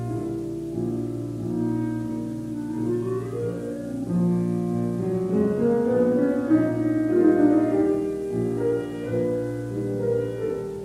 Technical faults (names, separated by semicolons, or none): none